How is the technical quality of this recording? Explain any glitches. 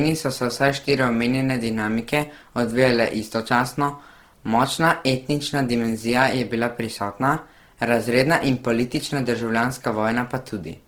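The technical quality suffers from plainly audible codec damage across the entire speech clip.

Opus compression, present throughout, is the likely cause. In its music-oriented CELT mode, a starved bit budget forces the encoder to fill bands by folding lower ones or with noise, which fits roughly 16 kbps. The speech sounds grainy, rough and noisy, though the bandwidth still extends to about 20.4 kHz.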